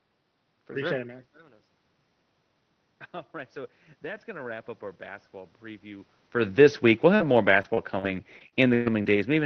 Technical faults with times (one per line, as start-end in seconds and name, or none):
3.31-6.15 automatic gain rising
7.15-9.18 repeated packet loss (robotic sound)